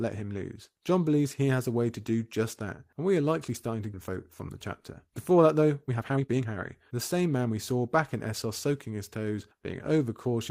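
At 3.93 to 3.95 s the speech skips ahead: about a second and a half of audio never plays, and the two sides are butted together with no fill. A listener hears an abrupt jump. On a waveform the envelope changes shape instantly at the join. On a spectrogram the formant tracks break off and restart abruptly, with no silent gap between them.

Jitter buffer speed-up follows in three stretches as the receiver drains the backlog by cutting out pitch-period-sized pieces. From 4.09 to 4.51 s playback runs at 107%, shedding a few tens of milliseconds. From 5.07 to 6.54 s it runs at 137%, removing roughly half a second, and sounds clearly rushed at unchanged pitch. From 6.94 to 8.46 s it is back to 107%, losing about a tenth of a second. A spectrogram shows compressed syllables with harmonics at their normal spacing. The waveform shows periods spliced seamlessly.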